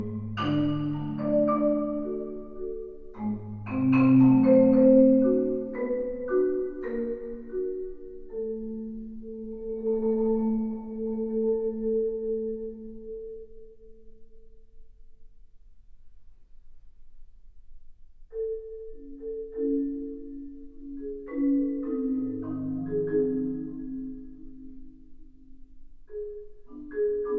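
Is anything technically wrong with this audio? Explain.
No, nothing technically wrong can be heard in this audio. No working path is noted, so there is nothing further to describe.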